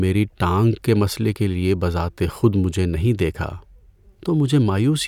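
Speech recording, and nothing is technically wrong with it.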